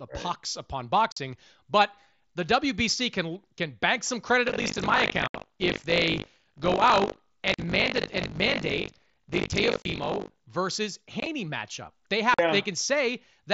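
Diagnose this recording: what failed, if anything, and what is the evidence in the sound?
Unconcealed Bluetooth headset packet loss on the wireless link between headset and phone. The speech drops out with abrupt edges at 1.12 s (45 ms), 5.28 s (67.5 ms), 7.54 s (45 ms), 9.82 s (30 ms) and 12.34 s (45 ms). Around 11.2 s the gaps are scattered over 60 ms, the longest about 22.5 ms, giving a brief chopped texture. The hole lengths fit whole 7.5 ms mSBC frames. Nothing fills them, so silence or an idle pattern replaces the lost packets.

Buffer tearing at the driver/buffer stage, from 4.46 s to 10.48 s. A steady robotic buzz at 50 Hz rides on the speech across that span, following the signal rather than sitting in the background. The 50 Hz rate points to a 20 ms buffer period. The application's writes and the hardware's reads have drifted into each other. Roughly a fifth of each period plays audio from about 70 ms earlier, with a hard splice at both edges, and that repeated discontinuity produces the rattle. 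The mSBC wideband coding carries speech up to 8 kHz with light graininess.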